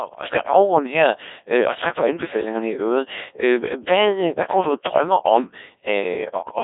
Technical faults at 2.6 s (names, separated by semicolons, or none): Codec 2 vocoder